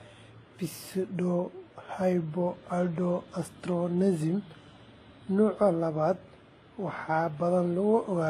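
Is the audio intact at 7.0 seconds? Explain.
No. At 7.0 s, as through the whole clip, the speech carries transcoding between lossy codecs. Nothing sounds above about 14.9 kHz, and there are layered artefacts: a thin, swirly, very low-rate quality underneath, with MP3 and WMA artefacts on top. The likely cause is a chain of encodes, an HE-AAC pass fitting roughly 20 kbit/s, then MP3 and WMA, each re-spending bits on the earlier damage. A single codec gives one consistent artefact character, not this mixture.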